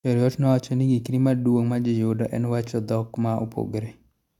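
Speech recording with no audible technical faults.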